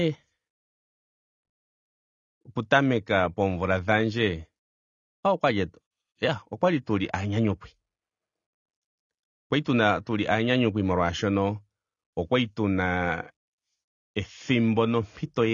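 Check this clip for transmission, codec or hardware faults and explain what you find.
There's one problem, and it runs the whole length of the speech. Nothing comes through above 7 kHz, so it sounds dull, with a warbly, fizzy smear on sibilants. That's likely AAC compression: a low-bitrate encoder, around 24 kbps, trimming the top end and coarsely quantising what's left.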